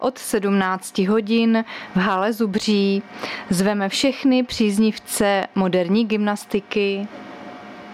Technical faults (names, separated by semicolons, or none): gain pumping